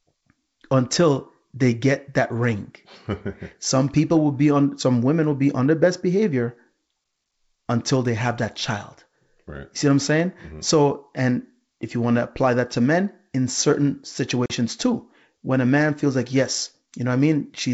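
Packet loss on an ADPCM call strikes at 14.46 to 14.51 s, right after "to men in certain." About 40 ms, roughly a couple of packets, drops out as a hard-edged hole of silence. The decoder's adaptive predictor and step size then no longer match the sender's, so the speech resuming at "too when a man" comes back briefly unsettled before recovering within some tens of milliseconds.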